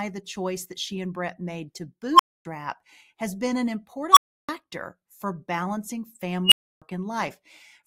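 At 2.13, 4.12 and 6.45 s, an unstable filter breaks into the speech. A recursive filter's feedback runs away. A tone near 1 kHz, near 3 kHz the last time, swells in 46 to 63 ms and clips. Then 260 to 320 ms of silence follows.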